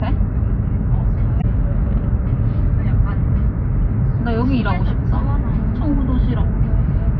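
A recording of everyday sound carries one corrupt frame decoded, from 1.40 to 1.44 s. For about 40 ms a short chirpy burst of noise cuts across the material, reaching fairly loud, around -10 dBFS at its peak. Its length points to a few damaged codec frames that the decoder played anyway, spreading energy into the wrong frequencies. Unlike a click from a sample-level glitch, it lasts about the length of the damaged frames. Unlike a dropout or concealed packet loss, sound is added rather than missing.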